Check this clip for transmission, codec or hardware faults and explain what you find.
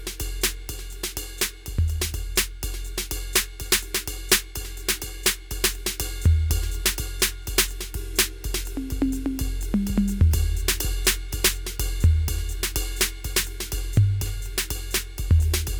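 No transmission, codec or hardware faults are audible in the music.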